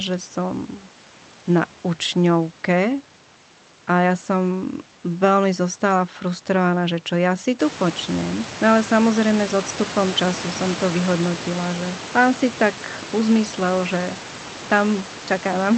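No technical faults occur in this speech at any point in time, and the room background that grows louder partway through is part of the recording itself.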